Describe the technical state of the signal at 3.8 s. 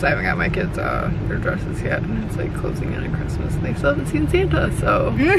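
At 3.8 s the signal is intact, with no audible dropout, distortion, glitch or other technical fault at that point.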